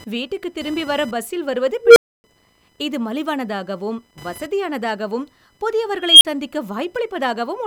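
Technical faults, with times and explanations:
Throughout: computer activity noise, a buzzy chirp pulsing at roughly 1 kHz and about 25 dB under the speech, from computer load changes disturbing the audio ground.
1.82–2.24 s and 6.02–6.25 s: unstable filter. After "திரும்பி வர பஸ்ஸில் வருவது" a low tone near 500 Hz runs away over 140 ms, then 280 ms of silence. Later, a tone near 3 kHz swells over 190 ms, then a 40 ms dropout.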